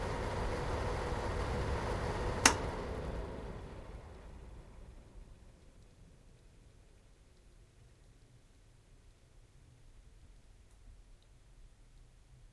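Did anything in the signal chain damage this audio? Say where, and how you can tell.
Yes. From 0.0 to 5.05 s, the sample-rate converter shows a resampler restarted on every block. A 100 Hz buzz rides on the sound, consistent with a 48 kHz to 24 kHz conversion run in 10 ms blocks. Each block edge lacks its true neighbouring samples, leaving a tiny step. A spectrogram shows a 100 Hz harmonic comb. The waveform shows small kinks every 10 ms.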